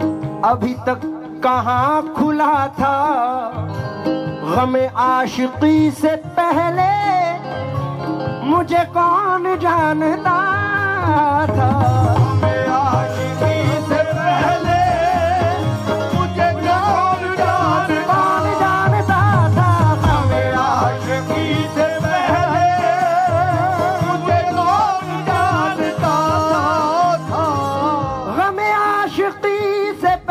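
Nothing in this recording jumps out as a technical fault; it just runs along without any glitch worth pointing to.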